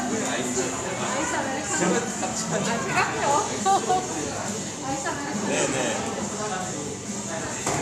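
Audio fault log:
No faults found in this recording.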